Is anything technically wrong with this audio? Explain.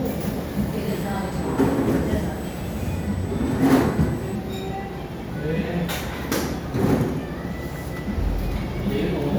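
Yes. From 0.89 to 4.35 s there is USB whine: current drawn in 125-microsecond microframes on the USB bus leaks in through the power or ground, adding a steady, fixed-pitch tone at 8 kHz, roughly 30 dB below the sound.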